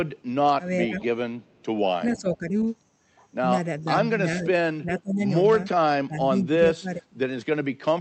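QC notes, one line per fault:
0.68–1.03 s, 2.05–2.66 s, 3.8–4.09 s, 4.31–5.3 s, 5.92–7.07 s: speech suppressed in double talk. The voice ducks by about 10 to 30 dB, deepest in the last two stretches, rather than cutting to silence like a dropout. The likely cause is the echo canceller turning down both sides while the far end talks.
0.86–1.05 s, 1.42–1.63 s, 2.07–2.19 s: echo leak. A faint copy of the voice arrives 444 ms late, about 20 dB down (about 40 dB at 1.42 s). The fixed delay separates it from room reverb, and the likely cause is loudspeaker echo that got past the canceller.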